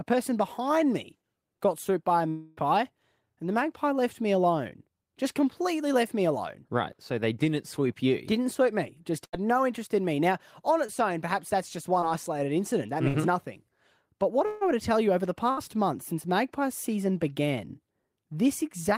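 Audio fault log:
2.29–2.59 s and 14.46–14.63 s, long network dropout. The audio gives way to a fading, held buzz or hiss for the whole gap, with no pure silence. About 280 ms and 160 ms of speech are gone. The likely cause is the receiver stretching its last sound while nothing arrived. The second gap ends just before "were to tell you".
9.25–9.35 s, 13.08–13.16 s and 15.51–15.59 s, burst of packet loss. Each gap is a short, dimming smear of the preceding sound. Speech then resumes with about 80, 60 and 60 ms missing. The last gap sits between "tell you over the" and "month since magpie season".
10.87–10.90 s and 12.00–12.04 s, short concealed packet loss. Roughly 20 ms failed to arrive in time each time. The decoder patched the hole from the previous sound and blended back. This leaves a brief wobble. The second falls between "own perhaps that's just" and "isolated incident".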